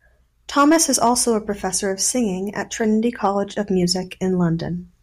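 A speech clip with hard clipping: from 0.58 to 1.22 s the level overdrives a stage by about 5 dB, flattening peaks so they crackle, and a brief 3.25–3.27 s burst, about 2 dB over, crackles. The waveform shows squared-off tops; a spectrogram shows broadband harmonic smearing upward.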